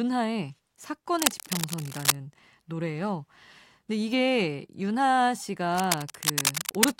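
From 1.18 to 2.15 s, a burst of cable scratch noise rides over the speech. It sounds like dense, uneven scratching and rustling, roughly as loud as the speech itself. It returns from 5.73 to 6.90 s with the same rough, crackling texture. The likely cause is a worn cable, connector or control being moved. Its contact resistance then flickers rapidly, and those jumps become bursts of noise in the signal.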